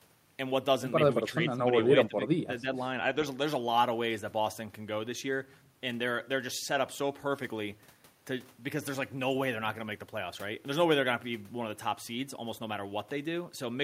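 The talker's speech dips at 1.35 to 1.62 s by around 15 dB, then drops harder, around 25 dB, from 2.08 to 2.82 s. This is speech suppressed in double talk, likely the echo canceller failing to separate the talker from the overlapping loudspeaker echo and turning both down.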